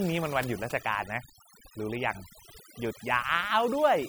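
Overdone noise removal runs throughout: an over-strong reduction stage cuts bands near its noise estimate, leaving twinkling near-silent gaps.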